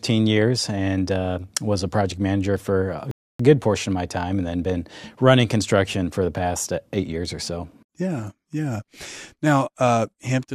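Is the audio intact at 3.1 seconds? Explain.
No. A rebuffering stall runs from 3.11 to 3.40 s: the player ran dry after "project manager for a", fell silent for about 0.28 s, then resumed exactly at "good portion of my". Unlike a dropout, nothing is skipped; time is only added.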